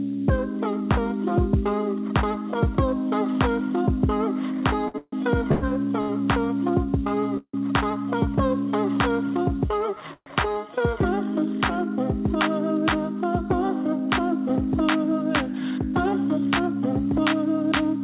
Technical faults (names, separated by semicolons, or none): low bit depth with noise shaping; repeated stalls (stutter); call audio freeze; jitter buffer speed-up